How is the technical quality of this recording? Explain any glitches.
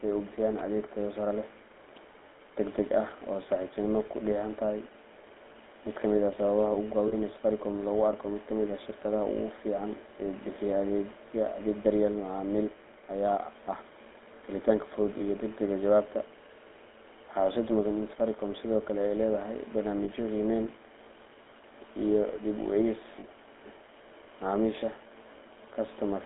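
The speech has plainly audible codec damage throughout and four brief dropouts.

GSM full-rate codec, throughout: the voice passes through a vocal-tract model driven by sparse pulse excitation, in a 250 Hz to 3.6 kHz band. That gives the gravelly, buzzy roughness and dull, narrow tone heard here, consistent with 13 kbps GSM.

Lost GSM frames at 7.08–7.14 s, 15.18–15.21 s (just before "iyo degdegga jawaabta"), 20.04–20.09 s (just after "ay leedahay") and 23.20–23.25 s (just after "u eegis"): missing 20 or 40 ms stretches are filled by repeating the last good frame, producing a short rough, metallic ring.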